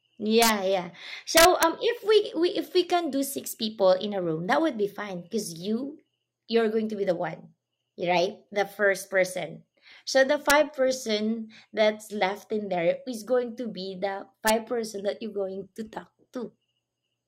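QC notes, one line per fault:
0.42–0.49 s, 1.37–1.63 s (just before "if we"), 10.50 s (just before "person that's left in"), 14.48–14.50 s (between "going to be the" and "person that"): integer overflow. Loud speech peaks went about 1 to 3 dB past the integer ceiling. Instead of being held there, those samples wrapped to the opposite extreme of the range, so each overshoot becomes a full-scale jump. The result is a harsh crack far sharper than ordinary clipping, longest at 1.37 s.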